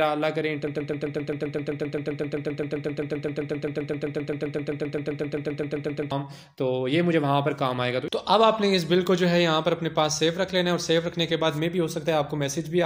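From 0.67 s to 6.11 s the audio falls into a broken-record loop. A fragment of about 131 ms plays back to back 42 times, giving a rapid, mechanical stutter, and whatever should have sounded in those five-odd seconds never arrives. On a waveform the stretch shows one identical tile copied end to end. A spectrogram shows the same narrow block repeating every 0.13 s, like vertical stripes. The likely cause is a stalled player, encoder or stream re-sending its last buffered piece.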